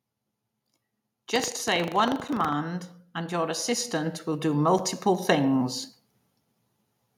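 From 1.28 to 2.55 s, buffer tearing causes a robotic rattle at 25 Hz. Writer and reader crossed, so a small slice of each buffer repeats audio about 70 ms old.

At 2.28 s and 4.79 s, a gap between chunks leaves a hard-edged hole of 6.5 ms. The joins fall 2.5 s apart, where silence was inserted.

From 3.15 to 5.65 s, automatic gain rises by about 10 dB. Speech and background swell together as the gain control lifts a quiet input.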